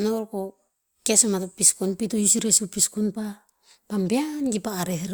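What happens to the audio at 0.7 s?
Nothing goes wrong at 0.7 s: the speech carries straight through that moment with no dropout, click, distortion or other fault.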